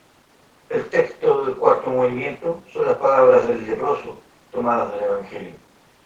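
Nothing is technically wrong with this speech recording.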